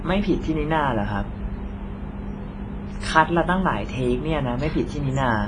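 Throughout, the speech stops at 10.6 kHz and rings with a washy hiss that breathes with the signal, likely from heavy WMA compression at roughly 24 kbps.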